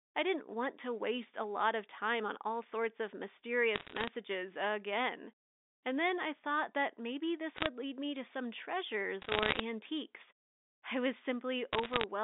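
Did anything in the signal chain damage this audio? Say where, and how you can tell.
Yes. Bit errors on a digital phone line show up as bursts of sharp crackle at 3.74 to 4.08 s, 7.56 to 7.67 s, 9.22 to 9.60 s and 11.73 to 12.04 s. Flipped bits in the G.711 stream each corrupt a single sample, with error rates around a percent or less.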